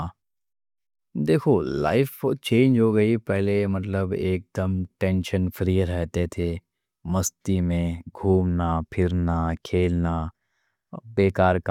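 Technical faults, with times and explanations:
No technical faults can be heard in this speech clip. Nothing in it calls for a time or an explanation.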